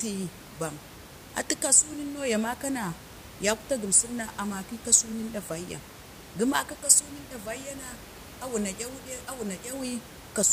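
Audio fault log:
No faults heard anywhere in this speech recording.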